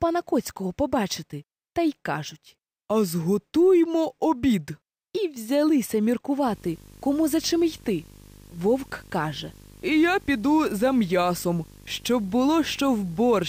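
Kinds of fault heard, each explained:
Video or display buzz: interference from a screen or video cable leaking into the audio path, entering at 6.47 s and continuing to the end. It appears as a steady buzz repeating at 50 Hz, the picture's field rate, with a gritty hash riding above it, plus a thin, very high whine at 15.6 kHz from the line scan. The interference sits roughly 20 dB below the wanted sound.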